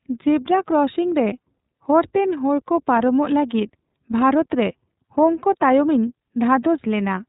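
From start to finish the speech sounds muffled and slightly rough and synthetic. That fits the iLBC codec in 30 ms frames, which passes nothing above 4 kHz.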